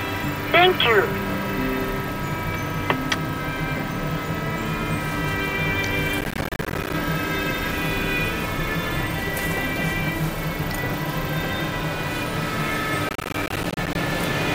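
Processor overload crackle appears from 6.21 to 6.93 s and again from 13.09 to 13.95 s. In each stretch the processor fails to deliver a long run of small audio buffers on time, dozens of them, and each miss drops in a brief hole of silence with abrupt edges. The gaps are spaced in a way that fits buffers of around 10 ms, so the holes blur into a gritty, tearing crackle over the sound until the load eases.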